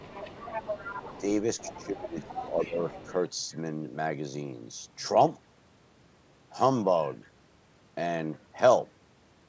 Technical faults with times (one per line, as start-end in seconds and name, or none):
0.00-1.21 other side's voice leaking through
1.58-3.12 other side's voice leaking through
1.67-2.79 speech suppressed in double talk